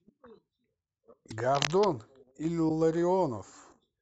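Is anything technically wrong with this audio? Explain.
Yes. There are two kinds of fault in this speech.

Broken MP3 bit reservoir, at 1.29 to 1.32 s and again at 2.68 to 2.71 s. Each time the sound jumps forward. Each event lasts about 30 ms. That fits one MP3 frame of 26.1 ms. The likely cause is missing frames. The frame after the cut reaches back into the reservoir for its data. It finds bytes from another frame.

Cable scratch noise, from 1.55 to 1.86 s. Dense, ragged rustling sits over the speech for about a third of a second. It is loud, only about 5 dB below the speech itself. This is likely a worn cable, connector or control being moved. Its contact resistance changes quickly and unevenly. That turns into crackly bursts of noise riding on the signal.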